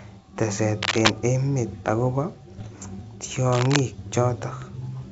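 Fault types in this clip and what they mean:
cable scratch noise: Two short bursts of dense, uneven rustling sit over the speech from 0.82 to 1.11 s and from 3.52 to 3.80 s. The first is somewhat louder than the speech and the second about as loud. This is likely a worn cable or connector being moved, with its contact resistance jumping rapidly. What separates it from digital errors is its continuous scratchy texture, with no discrete pops or step-like level changes.
bit errors on an ADPCM link: Between 2.52 and 2.67 s the speech breaks into pops and rough bursts, and its level briefly lurches up and down. The pattern points to seven corrupted frames at an error rate of around half a percent. Each flipped bit knocks the decoder's step size and predictor off track, so every error rings on for a few milliseconds instead of clicking once. That ringing, along with the level jumps, separates it from cable scratch. 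The 64 kbit/s G.722 wideband coding underneath stays clean.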